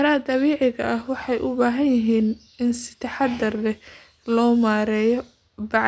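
Listening to this speech recording, nothing technical stood out.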